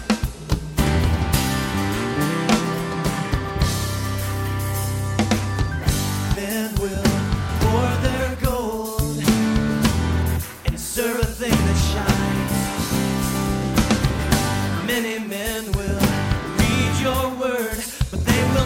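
At 6.34 s the playback performs a skip ahead: roughly half a second of audio is discarded while later material is already queued, cutting the delay by about the same amount. With no fill inserted, the two sides butt together in an abrupt forward jump.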